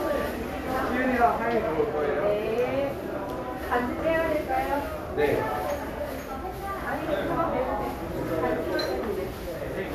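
No technical faults can be heard.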